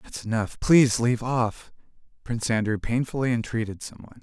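Nothing stood out on listening to this speech recording.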